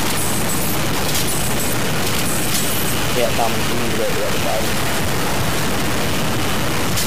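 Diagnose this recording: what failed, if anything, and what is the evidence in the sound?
Sample-format conversion likely reduced the audio to low bit depth without dither, which fits 3-bit truncation. Throughout, grainy distortion tracks the sound, with error roughly as loud as the signal. The waveform shows coarse staircase steps, and the spectrogram shows broadband hash following each sound.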